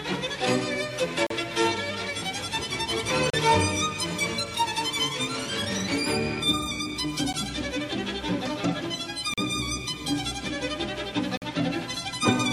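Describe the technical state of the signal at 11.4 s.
A gap between stream segments sits at 11.37 to 11.42 s: the time stamps of two adjoining segments, which fit 2-second segmenting, leave a hole that playback fills with silence. About 46 ms of hard-edged dropout interrupts the sound, with nothing lost.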